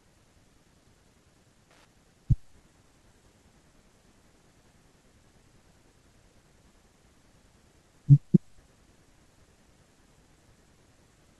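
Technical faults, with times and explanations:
1.71–1.85 s: loose connector crackle, a worn contact making and breaking, chopping the speech into irregular bursts; the waveform shows jagged dropouts and spikes, the spectrogram broadband vertical streaks.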